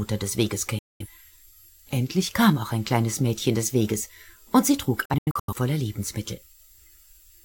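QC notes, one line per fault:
0.79–1.07 s: digital broadcast dropout. The receiver mutes for about 0.21 s, consistent with roughly five failed frames, and the audio is lost rather than delayed. On the waveform, a 3 ms fade drops to a flat line. On the spectrogram, it is a clean vertical gap across all frequencies.
5.05–5.54 s: digital broadcast dropout, broken up. Several short mutes, the longest about 85 ms, total about 0.26 s across a 0.43 s span as good and bad frames alternate. This shows as stacked vertical gaps with 3 ms edges.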